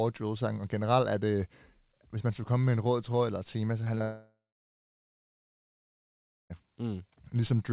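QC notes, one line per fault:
3.84–3.88 s and 3.98–4.02 s, short concealed packet loss: after "eller et tema så", packets arrived too late, so the decoder extended the preceding sound, leaving brief smears.
4.02–6.52 s, long network dropout: audio likely stopped arriving for about 2.5 s; concealment buzzes or hisses briefly and fades, then about 2.1 s of silence before speech resumes further on.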